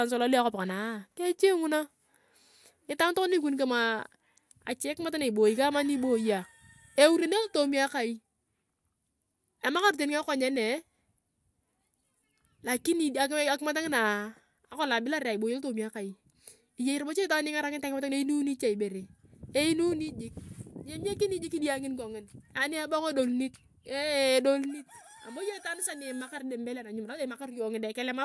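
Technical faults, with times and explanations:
No technical faults can be heard anywhere in the speech. There is nothing to mark at any point in the audio.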